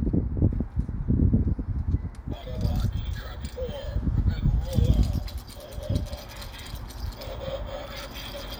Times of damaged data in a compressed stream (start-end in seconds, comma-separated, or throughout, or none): none